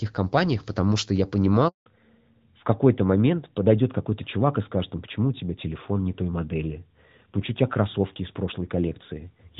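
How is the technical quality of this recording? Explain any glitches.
The recording has two linked faults: a brief dropout and then a lasting loss of bandwidth for the rest of the clip.

Handover gap, 1.68 to 1.86 s: right after "компаниях потому что я", the phone switched the call between networks and no speech frames arrived during the changeover. The voice dies away and about 180 ms of silence follows, so whatever was said in that span is lost.

Fallback to narrowband, from 1.86 s to the end: after the handover, the call dropped from the HD Voice codec to an older narrowband codec, which fits AMR-NB at 12.2 kbit/s. Nothing above 4 kHz survives from this point, so the voice sounds duller and rougher than before.

Before the gap, the wideband HD Voice codec carries the speech with only light coding damage, which fits AMR-WB at 12.65 kbit/s.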